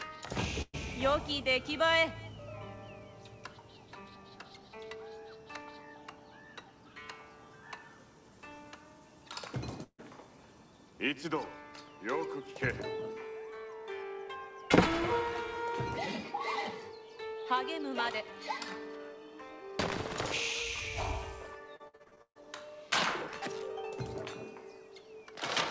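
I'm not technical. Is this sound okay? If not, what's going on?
No. Twice the sound briefly smears, holding the last sound and fading it, and then jumps ahead: from 0.62 to 0.75 s, and again from 9.83 to 10.00 s. Each one is a burst of packet loss. The audio travelled over a call connection in small chunks, and a run of them never arrived in time. The receiving end stretched the last bit it had to cover the hole, faded it down, then carried on, so roughly an eighth to a sixth of a second is simply gone each time.

From 21.76 to 22.44 s the sound turns choppy, with pieces dropping out. This is repeated packet loss. Instead of one gap, nine arrived in quick succession, the longest about 0.14 s. Each hole was patched by repeating the last sound, but the next one came before the audio could recover. About half of that stretch is patched-in filler rather than the real sound. The call line itself carries nothing above 8 kHz, which takes the very top off the sound throughout.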